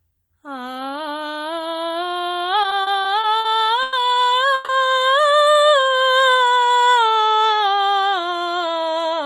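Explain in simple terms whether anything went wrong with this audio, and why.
From 2.63 to 3.47 s the music shows repeated stalls (stutter): six brief gaps, none longer than 50 ms, where late packets left the receiver stretching the last sound. At 3.83 to 3.95 s and again at 4.55 to 4.71 s the music briefly holds and buzzes for 100 ms and 140 ms, then resumes with nothing lost. This is a call audio freeze, likely from packets held up in transit. From 5.53 to 6.90 s a jitter buffer slow-down plays the music at 85% speed, repeating tiny slices to add 208 ms of reserve. From 8.76 to 9.20 s a jitter buffer speed-up runs it at 108%, trimming about 40 ms so the tempo briefly hurries.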